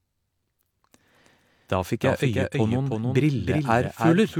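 A doubled audio track runs through the whole speech clip: a second full-band copy trails about a third of a second behind, roughly 5 dB quieter, with no decay or room colour, likely from the sound being captured again through a slower path.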